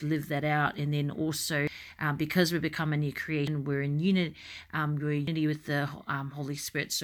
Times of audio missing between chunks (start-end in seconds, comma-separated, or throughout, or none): 1.67, 3.47, 5.27